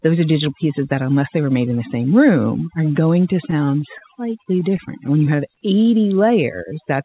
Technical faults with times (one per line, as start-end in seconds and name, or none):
0.00-7.05 overdone noise removal
3.51-4.03 repeated stalls (stutter)
4.45-5.27 repeated stalls (stutter)
5.35-6.97 jitter buffer slow-down